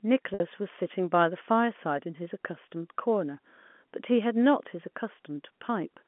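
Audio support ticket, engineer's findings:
Packet loss with pitch repetition, 0.34–0.40 s: about 60 ms of audio replaced by a held, buzzy repeated pitch cycle that fades before the signal cross-fades back. Gap fits three 20 ms packets dropped, concealed at the receiver. G.711 A-law narrowband path (200 Hz–3.4 kHz) sounds normal.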